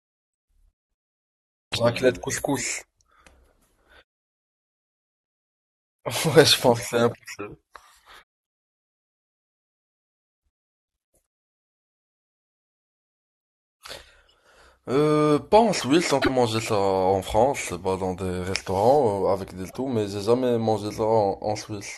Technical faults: damaged data in a compressed stream

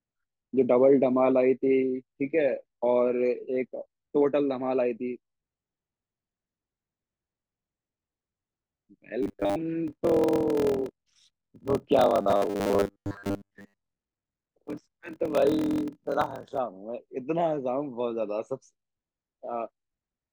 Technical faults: robotic sound from repeated short buffers; block size mismatch (padded)

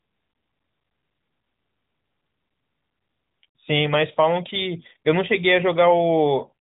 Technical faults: none

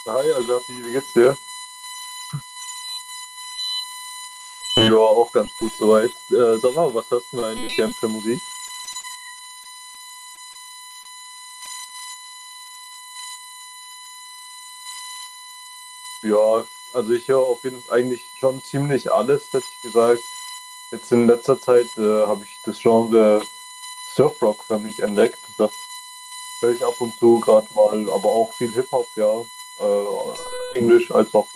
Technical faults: USB whine; short concealed packet loss; scattered short gaps

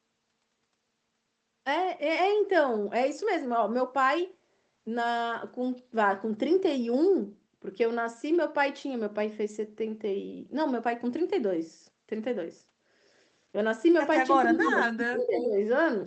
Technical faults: speech suppressed in double talk; echo leak

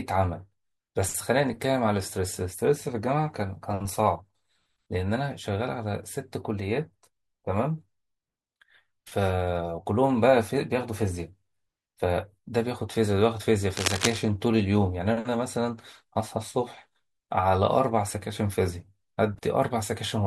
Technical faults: cable scratch noise

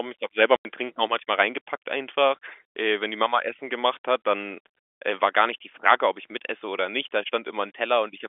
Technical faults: packet loss filled with silence

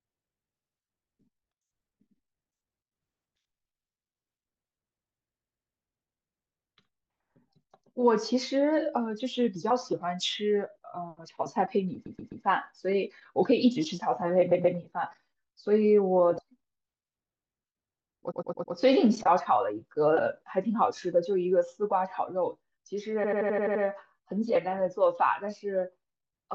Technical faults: repeated frames

